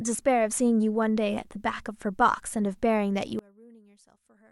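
A speech clip that, from 3.39 s to the end, collapses to a faint residue about 29 dB quieter, with the centred voice and low end nearly gone. The likely cause is one channel inverted: one side of the stereo pair has flipped polarity, so the shared centre content cancels when the channels are combined. Unlike a dropout or mute, a faint difference signal remains, and unlike a fade, the drop is abrupt.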